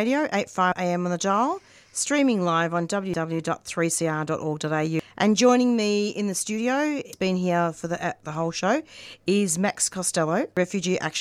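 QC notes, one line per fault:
0.72, 3.14 (after "dial streaming live on"), 4.99, 7.13 (between "me in the studio" and "been here for the") and 10.57 s: damaged data in a compressed stream. Each is a brief glitch in the speech: a chirp, squawk, click or short hole. Corrupted bytes at these points made the decoder misread or discard frames. It lost sync and searched for the next valid frame header.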